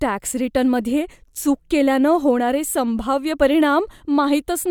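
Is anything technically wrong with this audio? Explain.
No, nothing is technically wrong with this audio.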